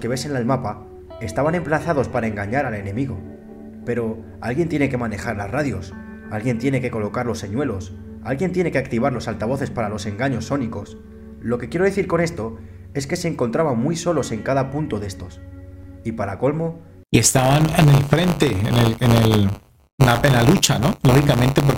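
From 17.23 s to the end of the clip, buffer tearing sets in: the writer and the hardware reader have drifted so their positions cross inside each period, leaving a small slice of every buffer, well under a tenth, filled with audio from roughly 20 ms earlier. The hard joins repeat at 100 Hz, producing a steady robotic buzz that sounds only while signal is present. A waveform shows step discontinuities every 10 ms, and a spectrogram shows regular vertical striations.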